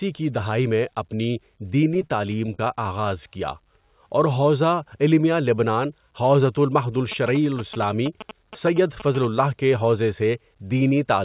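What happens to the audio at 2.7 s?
Just before 2.7 s there are two bursts of short concealed packet loss, at 2.54–2.64 s and 2.65–2.67 s. About 40 ms and then 10 ms of audio arrived too late, and the receiver bridged each gap by extending the preceding sound before blending back. This is heard as a brief smear.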